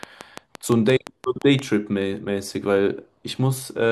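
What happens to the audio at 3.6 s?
At 3.6 s the speech carries on intact, with no audible dropout, click, distortion or other fault at that point.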